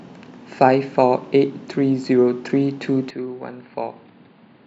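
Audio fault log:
3.10–4.66 s, input switched to a poorer device: the sound suddenly goes dull with nothing above 4.8 kHz, drops roughly 10 dB and picks up faint new background noise with no gap, likely from a swap to a weaker mic.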